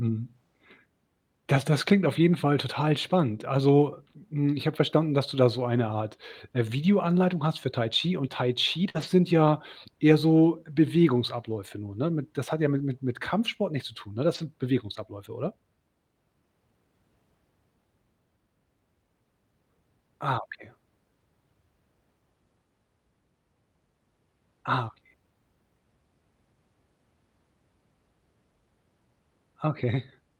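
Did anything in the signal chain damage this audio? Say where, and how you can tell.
Yes, at the network stage. A burst of packet loss at 8.89 to 8.96 s, just before "sind ja eher so", leaves about 50 ms of concealment fading out, then about 40 ms missing. On a spectrogram the harmonics smear flat and fade, then the speech resumes abruptly.

The network also caused lost packets rebuilt from error correction at 8.94 to 9.04, 11.42 to 11.56, 12.78 to 12.80 s (between "das hat ja" and "mit mit"), 14.34 to 14.40 and 20.34 to 20.36 s. Each is 20 to 80 ms of rougher, noisier audio decoded from low-bitrate copies, with no gap. The spectrogram shows grainy, blurred patches.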